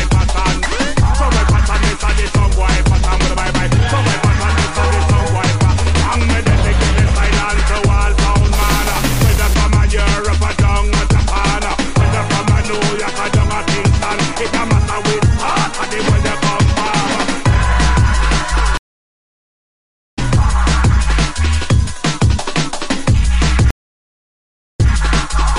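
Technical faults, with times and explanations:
18.77–20.19 s, stream reconnect: the connection dropped and the player went silent for about 1.4 s, then restarted a fresh decoder mid-stream and picked up roughly one and a half seconds further on, skipping material. It shows as a flat gap in the waveform and a blank band on the spectrogram, ending in a short fade-in with a sharp continuity break.
23.71–24.90 s, stream reconnect: a second dropout of about 1.08 s. This time playback resumes 0.12 s earlier, so a fragment repeats, consistent with a resent burst. It shows the same empty gap and a soft onset.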